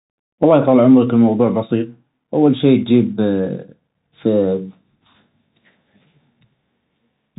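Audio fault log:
Throughout, Bluetooth CVSD headset codec: the speech sits in a narrow band with nothing above 3.8 kHz, and a grainy hiss runs underneath. The one-bit up-or-down coding, which fits a 64 kbps stream, can't track loud sharp sounds, so s sounds turn scratchy.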